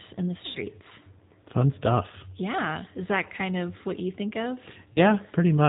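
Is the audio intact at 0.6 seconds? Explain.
No. Packets were dropped just after "in the", and the decoder concealed the gap from 0.46 to 0.59 s, a loss of about 90 ms, consistent with three packets. This is VoIP packet loss concealed by the speech codec: it stretched its last pitch and filter state while fading the gain, producing a buzzy tone or coloured noise that decays. Because each frame builds on the one before, the speech at 0.6 s is still rebuilding and sounds weak or distorted.

Throughout the clip, including this moment, the G.729 codec, at a rate that fits 8 kbit/s, rebuilds speech from a vocal-tract filter, a pitch predictor and a few pulses per frame. Nothing above 4 kHz gets through, leaving the audio dull, rough and synthetic-sounding.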